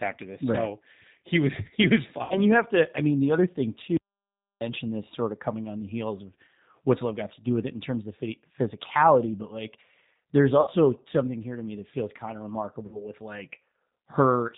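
A speech clip carried through a G.729 codec for its whole length. The damage is plainly audible. The sound is bandlimited, with nothing above about 4 kHz. Consonants lose their crispness. The speech has a rough, slightly synthetic edge, which fits the 8 kbit/s G.729A variant rebuilding the sound from a filter, a pitch predictor and a few pulses per frame. Three dropouts are then covered by VoIP packet loss concealed by the speech codec. The first runs from 2.24 to 2.44 s, after "he was fine" and before "you have to I". The second runs from 10.61 to 10.71 s, between "physicality but like there's" and "something here to me". The third runs from 12.86 to 13.06 s, after "that feels kind of". Each gap sounds like about 60 ms of missing audio, which fits two lost packets. The decoder stretches its last pitch and filter into a sound that fades. Recovery lags briefly once audio resumes.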